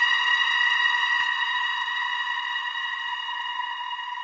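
At 1.20 to 1.22 s a skip ahead removes roughly 0.7 s of sound. The two sides butt together with no silent gap, unlike a dropout. From 1.34 to 2.80 s a jitter buffer speed-up plays the sound about 16% faster by trimming short pitch-period pieces, roughly 0.2 s in all. The pitch stays unchanged, which separates it from a resampling error. Throughout, the call codec leaves nothing above 8 kHz, which fits G.722.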